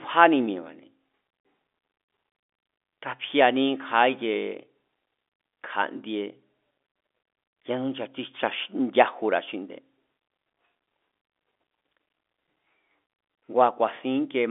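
Nothing is technically wrong with the speech recording, which carries the band-limited sound of a G.711 telephone line, roughly 250 Hz to 3.5 kHz, as that path normally does.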